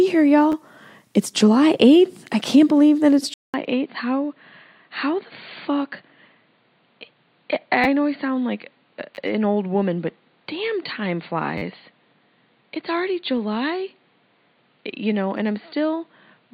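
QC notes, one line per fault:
0.52–0.54, 7.84–7.86, 9.15–9.18, 11.58–11.62 s, repeated buffer: brief buzzy stutters with hard joins, one slice replayed two to four extra times, which fits a 10 ms buffer.
3.34 s to end, input switched to a poorer device: 200 ms gap, then duller, quieter sound, nothing above 4.6 kHz, new hiss about 40 dB down; likely a device change.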